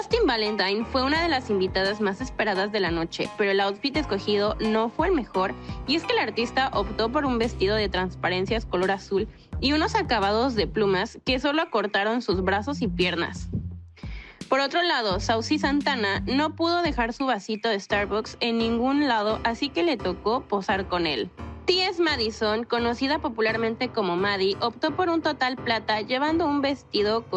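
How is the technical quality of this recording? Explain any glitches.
No technical faults are audible.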